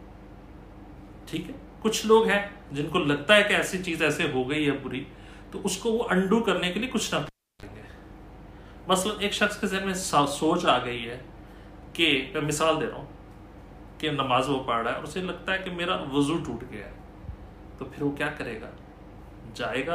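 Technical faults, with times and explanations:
7.26 to 7.66 s, cable pulled and plugged in: a live lead was pulled from its socket and pushed back in. Breaking contact causes a sharp pop, then the signal drops to near silence for about 341 ms while nothing is connected. As the plug goes back in, only the tip touches first, so the open input picks up a 38 ms burst of 50 Hz mains buzz. A second pop follows when full contact returns the sound.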